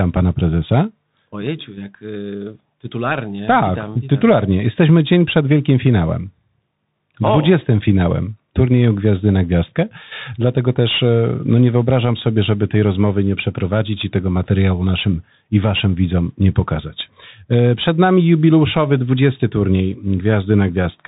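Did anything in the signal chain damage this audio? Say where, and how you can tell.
Yes, at the codec stage, throughout the speech: the Bluetooth CVSD headset codec. A spectrogram shows a hard ceiling at 4 kHz over a grainy noise floor. S sounds turn scratchy where the one-bit up/down steps can't keep pace, which fits a 64 kbps link.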